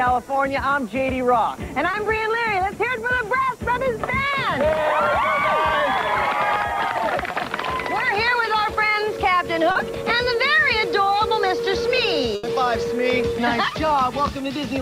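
Short concealed packet loss occurs at 1.91–1.95 s, 7.31–7.35 s and 9.71–9.77 s. Packets arrived too late or not at all, and the receiver patched the holes (20 ms, 20 ms and 40 ms) by extending the preceding sound, giving brief smears or wobbles. At 12.35–12.45 s a burst of packet loss leaves 80 ms missing. The concealment holds the last sound and fades it as a buzz or hiss, then the audio resumes with that stretch gone.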